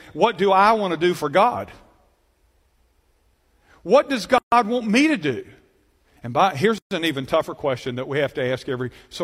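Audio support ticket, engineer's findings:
Speech drops out briefly, then resumes mid-flow: 4.38–4.52 s (about 140 ms, just before "want me to do") and 6.78–6.91 s (about 128 ms, between "by here's" and "an even tougher question"). Gap at a join of encoded pieces: separately encoded segments spliced untrimmed, so encoder start delay and last-frame padding remain, with codec-softened edges.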